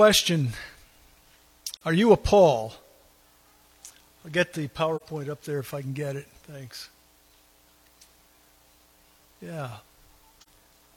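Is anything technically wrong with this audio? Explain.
Yes. There is AAC frame loss with muting at 1.76–1.82 s, 4.96–5.02 s and 10.41–10.48 s. Each time, about 42.7 ms of data, which fits one lost frame, is replaced with silence. The overlapping windows fade the sound out and back in, leaving a brief, soft-edged hole.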